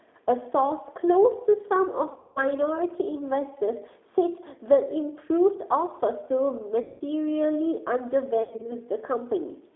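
The whole clip passes through the G.729 codec at 8 kbit/s. Speech is squeezed into a 300 Hz to 3.7 kHz band and sounds plainly rough and synthetic.

VoIP packet loss concealed by the speech codec strikes at 2.12 to 2.39 s, 6.82 to 7.01 s and 8.43 to 8.73 s. The decoder stretches the last sound into a fading buzzy tone or coloured noise. Speech stays weak briefly afterwards.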